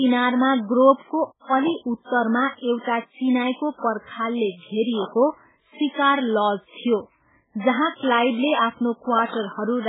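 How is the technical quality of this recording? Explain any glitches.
The recording has two kinds of fault: heavy low-bitrate compression throughout, and three loud pops.

MP3 compression affects the whole clip. Nothing is present above 3.8 kHz, so the speech sounds dull and band-limited. The damage is heavy, and it fits a very low bitrate of around 8 kbps. The likely cause is an encoder short of bits. It cuts the treble and drops weak frequency lines, which flicker from frame to frame. The result is watery, swirly speech with smeared consonant attacks.

Loud pops occur three times. The first is at 1.68 to 1.70 s, about 10 dB above the speech. The second is at 5.02 to 5.04 s, just after "चिनाईको पर्खालले", about 15 dB above. The third, at 9.19 to 9.36 s, is two pops in quick succession, again about 15 dB above. The likely cause is a sudden voltage step or pulse, from a plug, switch, static or driver glitch. 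Each is a sharp pop or thump on top of the speech, which continues underneath.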